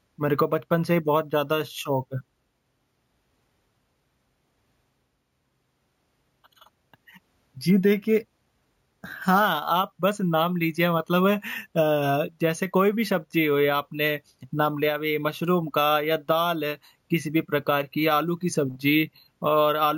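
A speech clip with imaging from sample-and-hold upsampling throughout. A bright metallic fizz rides on the voice between 8 and 16 kHz, about 20 dB down. It fits 16 kHz audio raised to 48 kHz by repeating samples without a smoothing filter.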